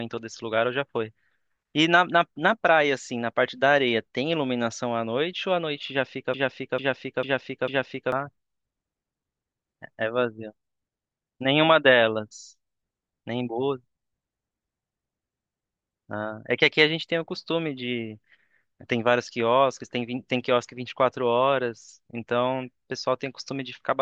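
From 6.34 s to 8.12 s a broken-record loop takes over: one 0.45 s fragment of speech plays four times back to back, identical each pass, likely from a stalled stream resending its last buffer. Unlike echo, nothing decays, and the missing speech never returns.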